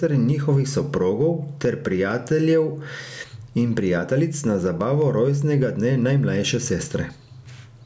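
Gain pumping runs through the whole recording. The likely cause is an input gain set far too high for the microphone, with a fast compressor or limiter clamping down on every loud syllable and then releasing. The level swings by around 10 dB. Loud and quiet parts of the speech sit close together, giving a squashed, breathing quality over the call-processed band, which stops at 8 kHz.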